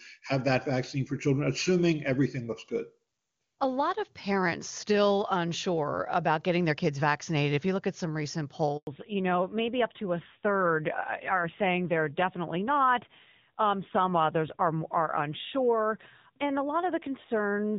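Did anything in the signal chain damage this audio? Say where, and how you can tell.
Yes. Network stage: a handover gap follows "look at some recent", silencing the speech for 100 ms at 8.77 s while the call switched links.

Codec stage: a fallback to narrowband starts at 8.87 s. Nothing above 4 kHz remains, and the duller, rougher sound points to a low-rate narrowband codec.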